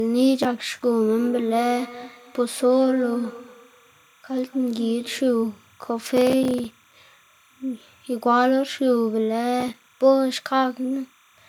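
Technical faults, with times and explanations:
Throughout, timecode bleed: a chirping warble sits about 35 dB under the speech. Leaked timecode flips between tones near 1 and 2 kHz, at 29.97 frames per second.
1.19 to 5.38 s, feedback echo between two devices: speech returns about every 200 ms, thin and ringing, at most about 16 dB down, as another device replays it.
6.17 to 6.94 s and 9.60 to 9.94 s, processor overload crackle: gritty tearing from many tiny silent gaps, which points to dozens of missed buffers of a few milliseconds each.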